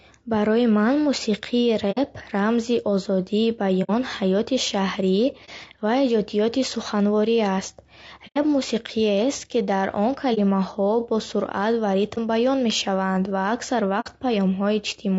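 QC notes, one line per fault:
throughout: low-delay AAC compression. Speech sounds rough and grainy, with noise between the harmonics and a dull or synthetic top band. The likely cause is AAC-ELD coding, whose short frames resolve pitch poorly, at a bitrate around 32 kbps.
1.91–1.98, 3.83–3.90, 5.45–5.49, 8.27–8.38, 10.34–10.39, 12.14–12.19 and 14.00–14.07 s: AAC frame loss with muting. Each is a soft-edged dropout of 30 to 90 ms. The decoder zeroed the missing frames' spectrum and the overlapping windows faded the sound out and back.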